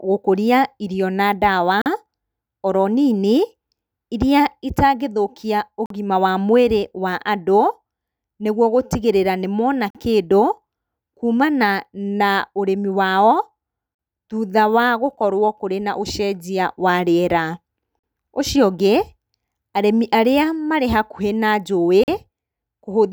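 Audio delivered in 4-second chunks with about 44 ms of silence inserted at each join leaves gaps between chunks, heard as short holes in the speech at 1.82–1.86, 5.86–5.90, 9.90–9.95, 13.95–13.99, 17.99–18.04 and 22.04–22.08 s.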